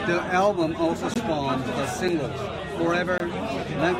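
At 1.14 s after "album also", 2.08 s and 3.18–3.20 s, blocks of digital silence (18, 5 and 21 ms, the last two fitting 256- and 1024-sample buffers) cut the speech abruptly, the 5 ms one heard as a tick and the longer two as short holes.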